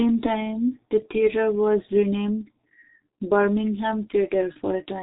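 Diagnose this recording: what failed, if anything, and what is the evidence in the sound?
A G.723.1 codec fault at the codec stage runs throughout: nothing above 4 kHz and slow 30 ms frame updates leave speech muffled, hoarse and consonant-blurred, fitting roughly 6 kbit/s.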